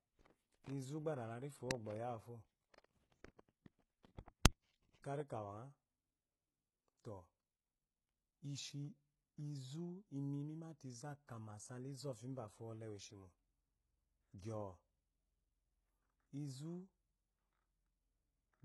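Throughout the clip, the treble of the speech sounds gritty and metallic, and s sounds come across lispy, with energy reaching up to about 21.1 kHz. The likely cause is heavy HE-AAC compression, consistent with a bitrate around 16 kbps. Its spectral band replication copies lower bands upward rather than coding the true treble, so harmonics there fail to line up. On a spectrogram, the upper region shows repeated, blocky patterns mirroring the bands below.

At 11.27 s, just after "inri mimate izu", a pre-echo appears: a brief hiss of about 17 ms leads into a sharp attack, which sounds softened. Quantisation noise meant for the loud onset has spread back across its coding block. On a waveform or spectrogram, a noise smear sits just before the transient.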